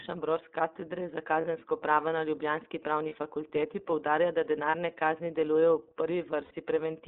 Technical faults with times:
0.00-7.08 iLBC codec
1.41-1.45 lost iLBC frames
3.09-3.13 lost iLBC frames
4.70-4.74 lost iLBC frames
6.44-6.51 lost iLBC frames

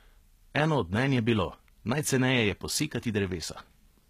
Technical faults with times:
0.00-4.10 HE-AAC compression

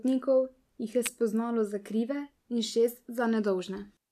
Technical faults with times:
1.06 electrical switching spike

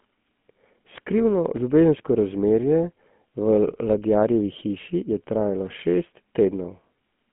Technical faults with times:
0.00-7.32 GSM full-rate codec

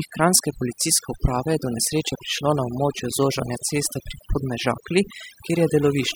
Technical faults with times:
0.00-6.15 overdone noise removal

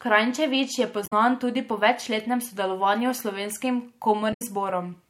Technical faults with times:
1.03-1.13 damaged data in a compressed stream
4.30-4.42 damaged data in a compressed stream

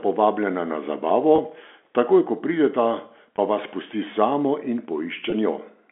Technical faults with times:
1.36-1.38 packet loss with pitch repetition
3.36-3.38 packet loss with pitch repetition
5.30-5.32 packet loss with pitch repetition

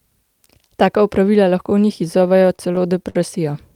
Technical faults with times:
2.07-3.16 repeated stalls (stutter)

